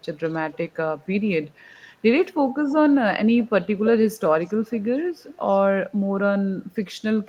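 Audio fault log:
3.36–3.49 s, 4.45–4.82 s and 5.18–5.57 s, echo leak: the far end is likely playing the call over a loudspeaker with an echo canceller that fails to scrub everything its microphone catches, so residue of the speech returns. Each time a faint copy of the speech trails the original by about 300 ms, sitting roughly 25 dB below it in the first and third stretches and fainter still, around 35 dB down, in the second.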